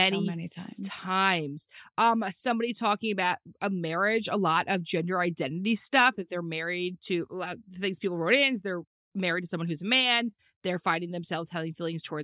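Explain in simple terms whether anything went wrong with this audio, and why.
Nothing went wrong with this speech audio; there are no technical faults to explain.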